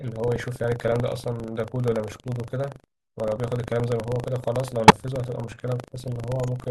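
It's a short speech recording with a constant buffer tearing problem. Running under the talking is a robotic rattle at about 25 Hz, and it drops out in the pauses because it only exists when there's signal. The writer and the hardware reader of the ring buffer have drifted until they cross inside every period. A thin slice of each buffer, roughly a small fraction of it, is still holding audio from around 70 ms earlier, and the hard joins on both sides of that stale slice give you the buzz. Two separate corrupt frame decoded events are also in there. The first runs from 4.88 to 4.94 s and is a loud burst peaking at about -5 dBFS. The second runs from 6.37 to 6.47 s and is a much fainter blip at about -35 dBFS. Each one sounds like damage to a few compressed frames that the decoder played anyway. The flipped bits put energy at the wrong frequencies for about the length of the hit frames, which is why you hear chirpy, noisy spurts instead of clean dropouts.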